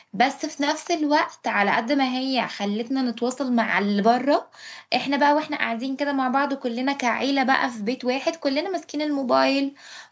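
Nothing goes wrong anywhere in this speech, which has simply passed through a call's microphone processing, so the lowest bass is trimmed away and nothing sits above 8 kHz.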